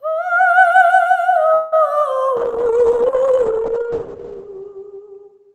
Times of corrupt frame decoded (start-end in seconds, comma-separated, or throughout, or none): none